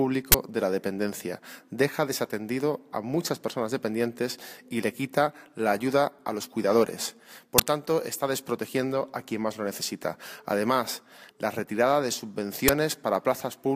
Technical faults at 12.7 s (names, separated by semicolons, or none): uninitialised buffer